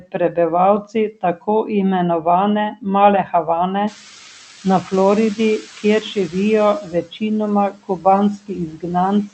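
Noise suppressor artifacts run through the whole clip. The suppressor pulls only about 3 dB from bands it judges to be steady noise, frame by frame, so the background sinks between the words and rises under them. A spectrogram shows blotchy, shifting low-level texture rather than a smooth noise floor.

From 0.0 to 1.48 s, from 2.22 to 4.02 s and from 4.64 s to the end, speech is cut by the noise suppressor. Soft consonants and word endings are mistaken for noise and dip by up to about 19 dB, sounding swallowed. The first two stretches lose a few hundred milliseconds each. On the waveform these show as sudden notches in the envelope, and on a spectrogram as gaps in the speech energy.

At about 4 s the room noise jumps by about 17 dB, and from 3.87 to 6.07 s the noise suppressor is catching up. Its estimate takes 2.2 s to adapt, so the louder noise comes through at first and then settles with only about 6 dB of reduction. 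A spectrogram shows a bright broadband band that gradually dims.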